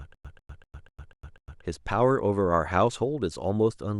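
From the very start until 1.63 s, the speech stutters: a 145 ms burst repeats six times, each followed by about 102 ms of dead digital silence, every 247 ms. This stutter with silent gaps likely comes from a stalled stream replaying its last fragment, losing the audio in between.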